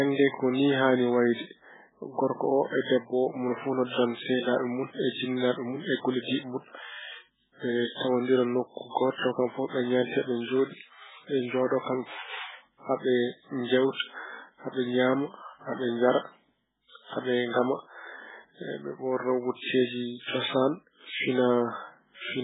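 Throughout, the speech sounds dull, watery and swirly, with nothing above 3.8 kHz, likely from heavy MP3 compression at a very low bitrate, around 8 kbps.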